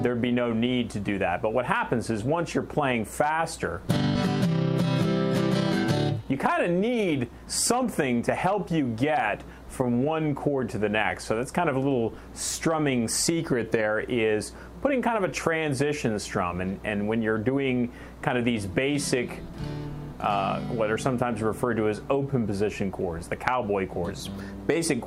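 At 4.15 s a skip ahead drops roughly a second of audio with no gap or fill, so the sound jumps straight forward, unlike a dropout, which leaves silence. From 6.17 to 8.13 s a jitter buffer speed-up trims repeated pitch-period slices, around 200 ms in total, so the audio runs at 111% speed without a pitch rise, which separates it from a resampling error.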